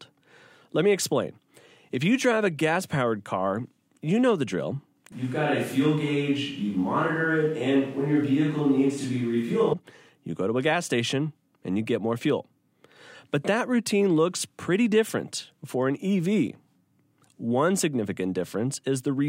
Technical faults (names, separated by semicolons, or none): switch to a distant microphone